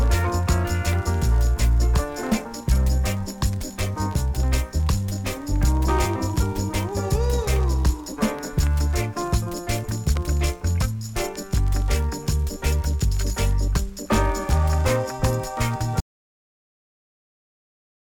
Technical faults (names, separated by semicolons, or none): audio dropout to silence